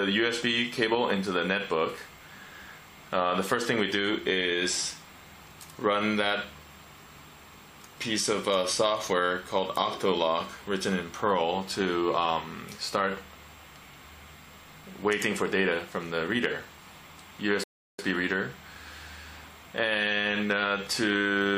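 At 17.64 s the audio cuts to silence and stays there until 17.99 s, then picks up exactly where it stopped. This is a rebuffering stall: the player exhausted its downloaded audio and paused for more, adding about 0.35 s without losing anything.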